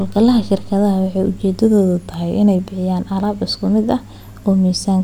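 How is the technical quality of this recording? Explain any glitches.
One glitch affects the speech. From 1.58 to 2.59 s, it slows 6.3% and drops 112 cents, then snaps back. This is likely a drift correction step refilling a buffer.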